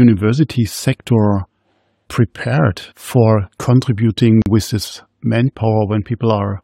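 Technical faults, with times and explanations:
4.42 to 4.46 s, gap at a join of encoded pieces: two separately encoded segments of this speech were butted together without trimming the encoder's start-up delay or the padding on the final frame, so that dead space survived into the joined file. The result is a silence of about 41 ms dropped into continuous speech, its edges smeared by the codec, before the talker resumes on "with this" exactly where the sound broke off.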